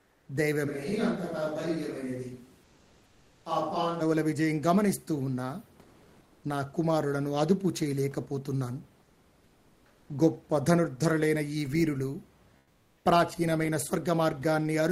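From 0.01 to 0.25 s the background goes flat and featureless, about 3 dB quieter. This is comfort noise in place of the background. The sender likely stopped transmitting during the pause, which fits Opus discontinuous transmission, and the receiver filled the gap with synthetic noise.

At 0.69 s the voice turns suddenly roomy and hollow, thinner in the bass and roughly 5 dB quieter, with faint room sound underneath. It snaps back at 4.00 s. This is a switch to a distant microphone, likely because the close microphone dropped out.

The same smooth synthetic fill returns at 2.65–3.43 s (about 2 dB down), 5.83–6.43 s (about 2 dB up), 9.07–10.09 s (about 4 dB down) and 12.61–12.97 s (about 7 dB down). Each time it replaces the real room noise, which sits about 33 dB below the speech.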